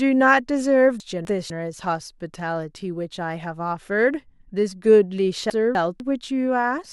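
Chunks out of order at 1.0 to 1.5 s and 5.5 to 6.0 s: a 250 ms chunk plays one chunk late, so the speech jumbles briefly, with three hard joins.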